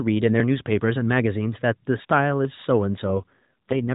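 From 3.06 s to the end, the speech turns rougher and more synthetic with no gap or change in band, an AMR rate drop that fits the codec falling from 12.2 to 4.75 kbps.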